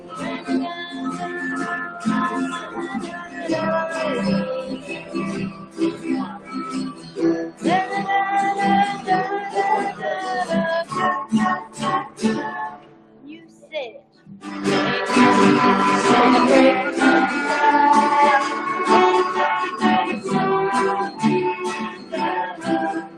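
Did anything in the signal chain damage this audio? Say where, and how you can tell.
Yes. It's call processing: a speech noise suppressor was left on over this sound, treating steady material as noise, so levels pump by about 15 dB.

You can hear the sound cut by the noise suppressor at 0–3.48 s, 4.63–7.64 s, 11.6–14.45 s and 21.09 s to the end, with sustained parts sinking by about 12–13 dB.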